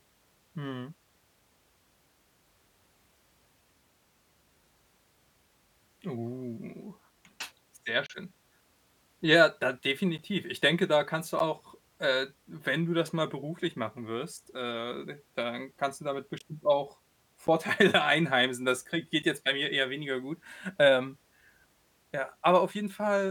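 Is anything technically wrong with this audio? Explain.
Yes. Blocks of digital silence drop out at 8.06–8.10 s, 10.18 s, 11.39 s (after "denke da kannst du"), 16.38–16.41 s, 17.47 s and 19.22 s, lasting about 11 to 32 ms. Their lengths fit 512-sample buffers the program likely did not fill in time, so the sound cuts out abruptly. A waveform shows flat gaps. A spectrogram shows blank vertical slots.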